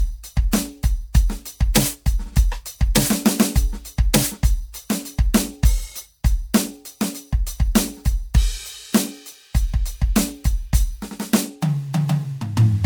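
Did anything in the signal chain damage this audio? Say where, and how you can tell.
Yes. The damage sits at the codec stage and runs through the whole music clip. The sound is swirly and hollow, with smeared attacks and a grainy wash. That is more damage than one lossy pass would leave. Content reaches about 20.1 kHz, so the top end was not simply cut. This points to generation loss. The audio was likely decoded and re-encoded as MP3 about three times, at a rate that fits 96 kbit/s. Each pass quantised again on a shifted frame grid, stacking noise and spectral holes.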